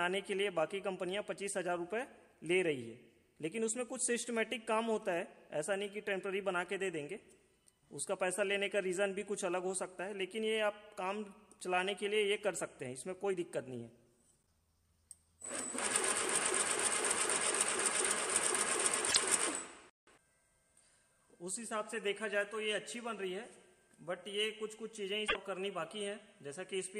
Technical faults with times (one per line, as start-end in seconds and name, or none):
19.06-19.17 damaged data in a compressed stream
25.25-25.36 damaged data in a compressed stream